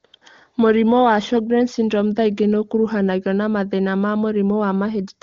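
A speech clip carried over AMR wideband. AMR comfort noise replaces the real background from 0.05 to 0.13 s and from 0.17 to 0.21 s. Speech frames stopped, so smooth synthetic noise switches in briefly.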